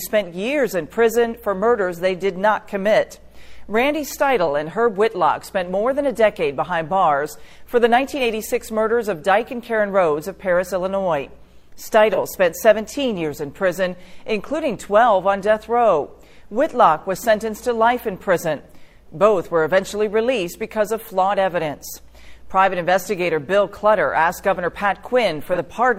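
At 12.13 to 12.18 s and again at 25.46 to 25.58 s, AAC frame loss with concealment briefly smears the sound into a noisy, phasey patch. Each loss spans 42.7 ms, which fits a single frame. The decoder rebuilds it from the preceding spectrum, so unlike a dropout it leaves no silent gap.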